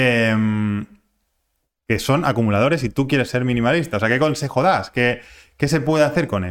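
No technical faults can be heard anywhere in this recording.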